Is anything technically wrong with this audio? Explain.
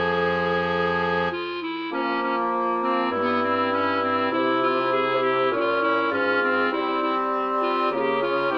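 No, nothing stood out as technically wrong on listening.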